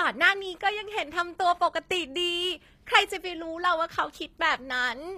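Throughout, the speech carries plainly audible HE-AAC compression damage, likely from a low bitrate around 24 kbps. The treble is regenerated rather than kept, so s sounds turn gritty and metallic. Unlike a simple low-pass, the top still extends right up to the 14.9 kHz ceiling.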